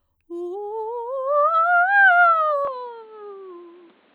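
At 2.65 s the music suddenly goes dull and boxy through to the end, with nothing above 4.5 kHz and a faint new noise floor well below the music. The level holds and there's no gap, so it's likely the input switched to a poorer device.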